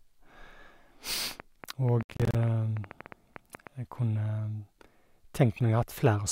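From 1.31 s to 3.68 s, a train of clicks runs at an irregular pace of about 8 per second, some twenty in all, peaking roughly 5 dB above the speech. The similar pulse shapes point to a likely source in nearby interference or a faulty connection or power supply.

At 2.03 s to 2.35 s, processor overload crackle cuts in. About twenty buffers, each around 10 ms, were not delivered on time and dropped to silence, so the speech breaks into a gritty, hard-edged tearing that stops once the load clears.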